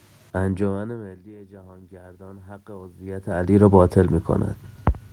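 From 0.7 s to 3.36 s the automatic gain control responds to a drop of about 24 dB at the input, which follows the talker moving back from the microphone around half a second in, by raising its gain gradually, by about 11 dB over those two and a half seconds. Because the gain stage cannot tell speech from the room noise, both swell together, so the background rises audibly under the voice as the speech level creeps back up.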